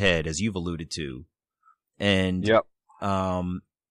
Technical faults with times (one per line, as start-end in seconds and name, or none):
none